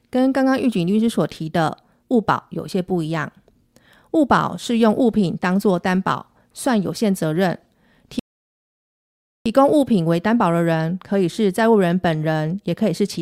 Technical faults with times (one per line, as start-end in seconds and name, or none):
8.19-9.46 rebuffering stall